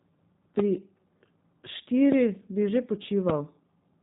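Thin, band-limited speech, slightly rough and synthetic, with nothing above 3.8 kHz throughout, which points to G.729 codec compression at 8 kbit/s.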